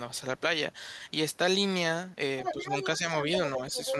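A speech clip in which an echo canceller at the talker's end likely failed to remove the other side's loudspeaker playback from the microphone, so the other side's voice leaks through from 2.43 to 2.98 s and again from 3.70 to 3.93 s, sitting only a few dB below the talker as a second voice. Where both sides overlap, the same canceller likely turns the talker down along with the echo, producing speech suppressed in double talk: dips of a few dB from 2.52 to 2.66 s (around 150 ms) and from 2.98 to 3.05 s (around 70 ms).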